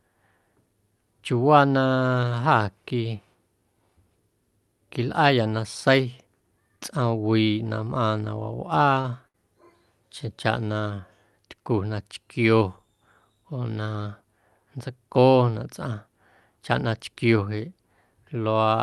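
A speech clip passed through a WebRTC call path with an Opus codec, band-limited to about 12 kHz, that has two short stalls from late packets, at 9.01 to 9.06 s and 9.28 to 9.36 s. In each, the receiver's jitter buffer ran dry, so the last sound was stretched by 30 ms and then 61 ms before speech picked up exactly where it left off. Unlike packet loss, nothing is skipped. The sound is simply held, with a slight buzz or dip, and everything afterwards lands about 90 ms later.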